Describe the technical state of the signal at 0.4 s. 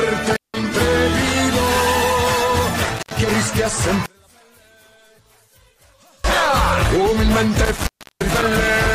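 At 0.4 s the signal is inside an intermittent contact dropout running from 0.33 to 0.57 s. A loose plug or cable conductor briefly loses connection, so the programme path opens for roughly 175 ms of that span. The audio cuts out abruptly, with crackle at the moments the contact breaks and remakes, and only a faint hiss remains while the line is open. At 0.4 s the wanted sound is absent.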